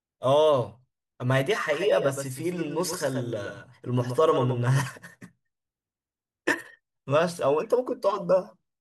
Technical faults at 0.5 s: none

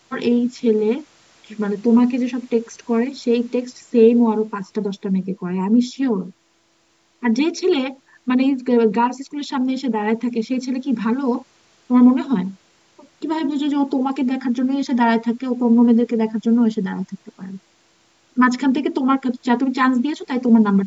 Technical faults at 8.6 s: none

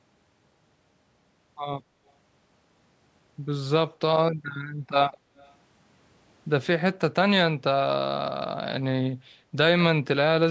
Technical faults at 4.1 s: none

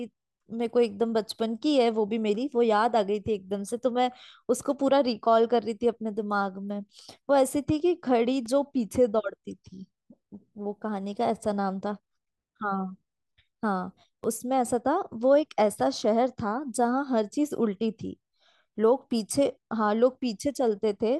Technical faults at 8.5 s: block of digital silence

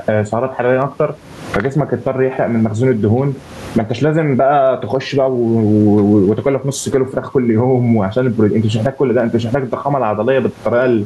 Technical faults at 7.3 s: gain pumping

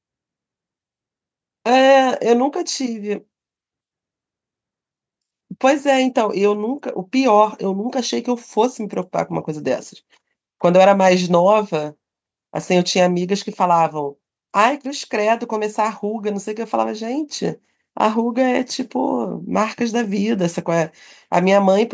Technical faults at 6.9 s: none

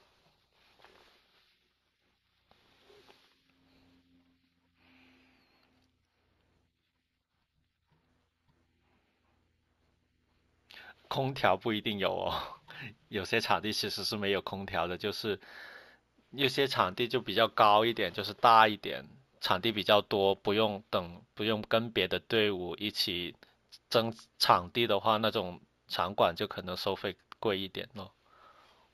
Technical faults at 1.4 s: imaging from linear upsampling

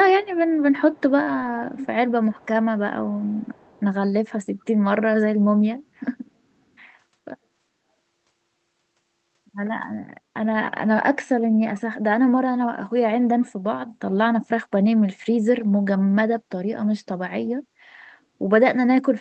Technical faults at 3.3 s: echo leak

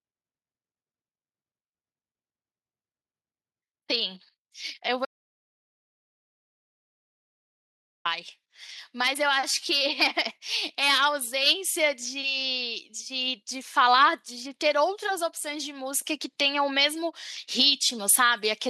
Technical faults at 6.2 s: audio dropout to silence

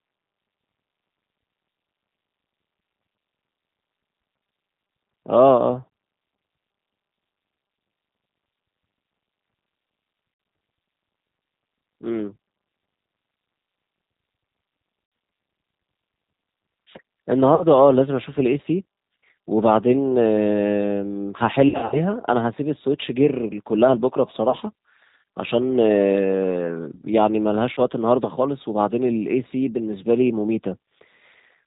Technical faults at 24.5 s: G.729 codec; VoIP packet loss concealed by the speech codec

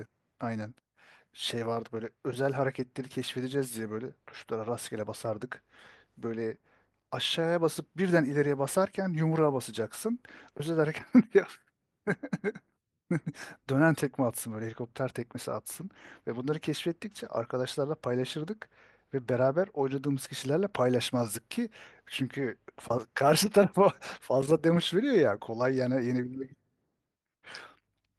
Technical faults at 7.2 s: none

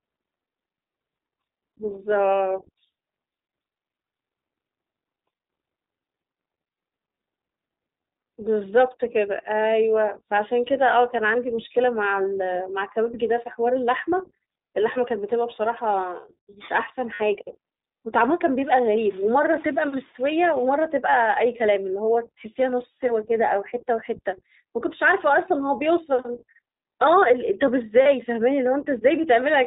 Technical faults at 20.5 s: iLBC codec; low bit depth without dither

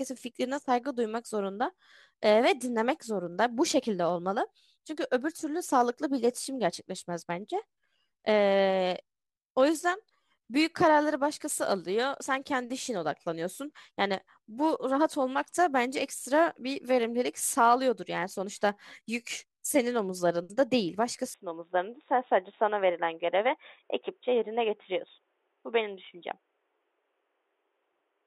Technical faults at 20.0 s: none

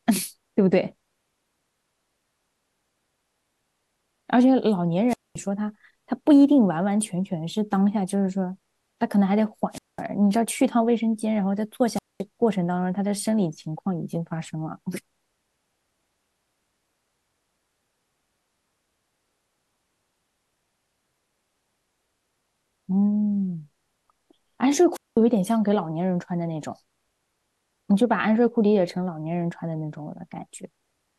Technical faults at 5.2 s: wireless microphone squelch dropout

